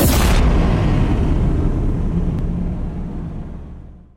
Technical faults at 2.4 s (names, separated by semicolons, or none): damaged data in a compressed stream